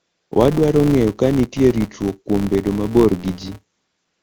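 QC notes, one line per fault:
Throughout: filter restarted on every block. A steady buzz at about 172 Hz sits under the sound. It rises and falls with the level of the speech. The filter drops its memory at each block boundary and starts again from silence. That leaves a small transient at the head of every block. The repeat rate fits a 256-sample block. Loud passages make the ticks stronger. Quiet ones make them fainter.
0.00 to 0.31 s and 3.75 to 4.23 s: AMR comfort noise. At the start and at the very end, the real background is replaced by a smooth, even hiss. The phone judged these stretches silent and stopped sending speech frames, for 314 ms and then 476 ms. The receiver filled each gap with synthetic noise built from a rough level and spectrum description. The hiss switches in and out, unlike the background around it. The HD Voice wideband coding of the speech between these stretches is clear.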